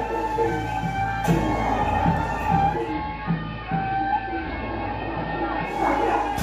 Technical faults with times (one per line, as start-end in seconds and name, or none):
2.71-5.87 digital radio blending to analogue